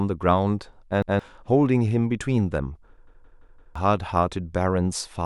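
At 1.02 s and 3.07 s, a repeated buffer replays the same 0.17 s piece of speech, once then four times, giving hard-joined stutters rather than a dropout's silence.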